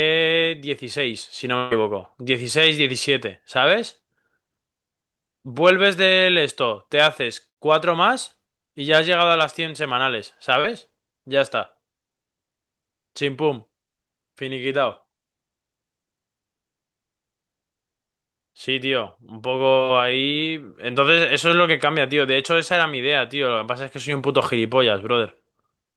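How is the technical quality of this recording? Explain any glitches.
The recording has four transmission dropouts, two longer and two brief, all patched over by the receiver's loss concealment.

Burst of packet loss, at 1.57 to 1.73 s and 7.49 to 7.58 s. About 140 ms and 80 ms of the speech stream failed to arrive in time. The receiver extended the last decoded sound across each hole, about 136 ms and 75 ms of synthetic fill, fading it as it went. Each event is heard as a held, decaying tail, after which the speech picks up slightly further along, with the intervening portion gone.

Short concealed packet loss, at 10.60 to 10.66 s and 19.74 to 19.78 s. These gaps are much smaller, about 40 ms and 20 ms. The decoder covered them with roughly 35 ms and 15 ms of extrapolated signal, then cross-faded back into the received audio. The result is a momentary smear or wobble rather than an obvious gap.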